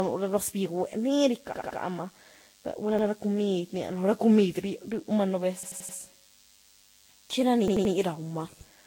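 Speech runs under a steady, thin DECT cordless phone buzz throughout. It is a 100 Hz tone with many harmonics, sitting about 35 dB below the voice, from a nearby handset or base station whose radio bursts every 10 ms are rectified in the audio path. Unlike mains hum, it sounds sharp and buzzy rather than a smooth low drone. The whole recording also has a swirly, hollow, smeared quality with nothing above 16.6 kHz. This is likely generation loss from several successive Vorbis encodes near 60 kbit/s, around seven in all. Fresh quantisation on each pass piles up the damage, so it sounds worse than a single encode at that bitrate would. Repeated buffers cause hard stutters at 1.54–1.79 s, 2.99–3.07 s, 5.63–5.97 s and 7.68–7.94 s, where the same 85 ms chunk plays again one to four extra times. That chunk length fits a 4096-sample buffer. Nothing is skipped, so these are repeats rather than dropouts.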